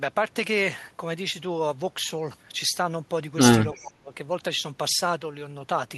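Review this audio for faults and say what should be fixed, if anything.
From 3.73 s to 4.14 s the speech drops in level, sinking by roughly 20 dB at its deepest, with the loss spread over about 0.4 s. This is speech suppressed in double talk, likely caused by both ends talking at once while the echo canceller could not tell this talker apart from the loudspeaker echo and so attenuated everything it heard. To prevent it, use an echo canceller with reliable double-talk detection and less aggressive residual suppression.

Overlapping the start of that dip, from 3.74 s to 3.80 s, a faint delayed copy of the speech appears, arriving about 330 ms behind the original and sitting roughly 30 dB below it. This is echo leak, likely from the far end playing the call over a loudspeaker, with its canceller failing to remove everything its microphone picked up, so a short scrap was returned down the line. 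To prevent it, improve the far end's echo cancellation or use a headset there.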